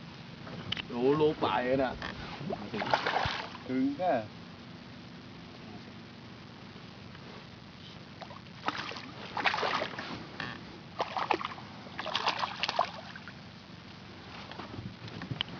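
No technical faults turn up anywhere in this recording, so there's nothing here to flag.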